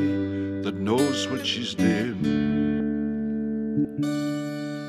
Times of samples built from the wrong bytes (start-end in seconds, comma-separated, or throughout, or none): none